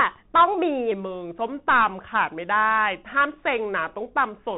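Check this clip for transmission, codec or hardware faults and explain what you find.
Two faults turn up here: a Bluetooth headset codec throughout, and a slowed section from 0.92 s to the end.

Bluetooth CVSD headset codec: for the whole clip, nothing passes above 3.8 kHz, and the one-bit up/down encoding leaves plainly audible grainy roughness, consistent with a 64 kbps CVSD link.

Section at the wrong speed: from 0.92 s onward the speech plays at 0.893x speed, so it drags and drops roughly two semitones, likely from playback on a mismatched clock.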